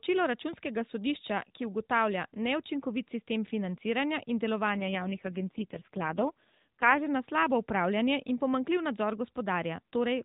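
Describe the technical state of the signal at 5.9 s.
At 5.9 s the speech is rougher, buzzier and more synthetic, with the bandwidth unchanged and no gap in the sound. This is an AMR rate drop running from 4.70 to 7.08 s, starting after "neučinkovit sistem financiranja in" and lasting until "na slabo upravljanje". The AMR-NB codec, heard at its full 12.2 kbps before and after, has been switched to a far lower mode, which fits its 4.75 kbps floor. Far fewer bits are left to model the voice, so it loses its natural detail.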